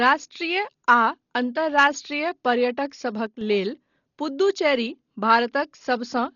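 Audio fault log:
throughout: Dolby Digital compression. The speech sounds dull and heavily damaged, with nothing above 6.9 kHz and a rough, fluttering noise around tones. This likely comes from AC-3 coding at a very low rate, fitting about 32 kbps, which fills bit-starved frequency lines with noise.
3.26 to 3.41 s: one channel drops out. For about 0.15 s the level falls abruptly by about 6 dB, then recovers. One stereo channel was likely lost, so the mono sum kept only half of the shared sound.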